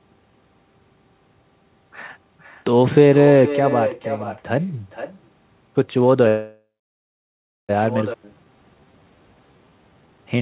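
Throughout the speech there is echo with no canceller: a thinner copy about 11 dB below the talker returns roughly half a second later, picked up from a far-end loudspeaker. From 6.28 to 7.71 s a call audio freeze stretches the last sound into a fading fill, then about a second of silence. This is likely a stall in packet delivery that emptied the jitter buffer, adding about 1.4 s of delay without losing anything. At 8.13 to 8.16 s playback skips ahead, jumping across roughly a second of missing audio with almost no gap at the join. From 8.2 s to the end a jitter buffer slow-down repeats short pitch periods to rebuild its reserve, so the speech runs at 84% speed at unchanged pitch, adding 371 ms.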